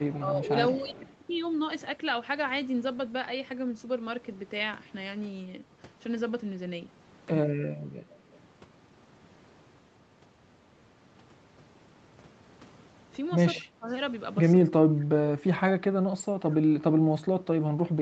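Speech carrying faint echo leak, a second copy of the talker trailing about 0.21 s behind, at 0.09–0.19 s, 0.7–1.13 s, 7.81–8.39 s and 16.52–16.57 s, roughly 20 to 30 dB under the direct sound. Unlike reverberation, it is one discrete repeat at a fixed lag, likely from a loudspeaker echo canceller letting residue through. Speech suppressed in double talk shows at 0.2–0.93 s, 8.23–8.28 s, 13.59–13.87 s and 14.64–17.64 s, where the talker's own level sinks, from a few dB to about 25 dB over some two seconds near the end. That points to the canceller ducking the talker while both sides speak, not to an added sound.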